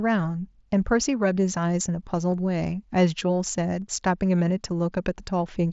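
At 2.32 s and again at 3.81 s, concealed Bluetooth headset packet loss patches a 7.5 ms gap, consistent with one lost frame, by repeating a matching stretch of recent waveform through the mSBC link. Unlike a true dropout, neither event leaves silence or a click.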